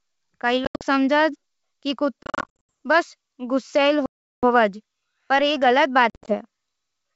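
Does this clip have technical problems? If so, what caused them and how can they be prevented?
Yes: packet loss on an ADPCM call at 0.65–0.84, 2.23–2.71, 4.06–4.44 and 6.10–6.36 s. Lost packets become hard-edged gaps of flat silence in the waveform and blank columns on a spectrogram, and the decoder's predictor and step size desynchronise, so speech resumes slightly distorted. Adding jitter buffering, packet-loss concealment and decoder state resets would prevent this.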